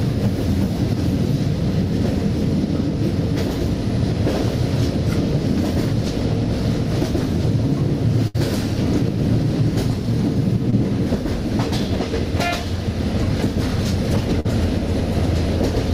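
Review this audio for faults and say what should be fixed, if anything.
At 8.27 to 8.36 s there's a burst of packet loss. About 60 ms of audio never arrived in time, so the receiver kept the last sound going for roughly 68 ms, fading it out as a held buzz or hiss, then resumed further along with that chunk gone.

There are also two short concealed packet losses, at 10.70 to 10.74 s (about 20 ms missing) and 14.40 to 14.47 s (about 40 ms missing). Each time the decoder bridged the hole by extending the preceding sound and blending back in, which comes across as a brief smear or wobble.

To fix these, it's worth enabling forward error correction and giving the jitter buffer a bit more headroom, and tracking down whatever on the network path is dropping or delaying packets.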